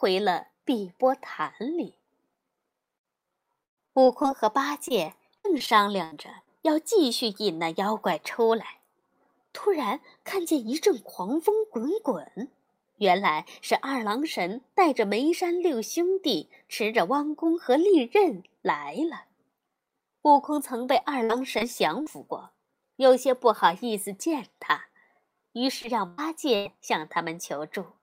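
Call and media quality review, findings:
Repeated packet loss (robotic sound), 3.63–4.26 s, 4.88–6.48 s, 20.98–22.08 s. Choppy speech with pieces missing. Jitter buffer/network path: four, six and four gaps, each patched by extending the last sound. Longest gaps 134, 75 and 53 ms. Concealment covers roughly 30%, 13% and 11% of each stretch.

Short concealed packet loss, 25.82–25.86 s. Brief smear/wobble, about 20 ms missing. Decoder packet loss concealment extends the preceding sound, then crossfades back into real audio. A short consonant may drop out.

Burst of packet loss, 26.08–26.20 s and 26.56–26.67 s. About 100 ms lost each time. Receiver stretches the last sound and fades it as the gap continues, giving a held buzz or decaying hiss. Speech resumes later with the intervening segment gone.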